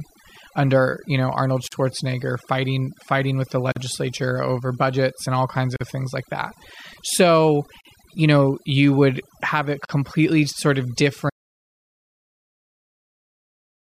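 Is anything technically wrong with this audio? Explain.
Yes. Throughout, overdone noise removal leaves the speech over near-silent, twinkling background; unlike a plain low-pass, the damage flickers band by band.

Gaps at joins of encoded pieces open at 1.68, 3.72, 5.76 (between "budgets and all kinds" and "of things like that"), 7.81 and 9.85 s, each about 44 ms and about 2.0 s apart. That regular spacing marks encoder start delay and end padding left in at each join, not random dropouts.

An audio dropout to silence begins at 11.30 s, after "sort of", and runs to the end. It is silence with no room tone, likely from a lost input.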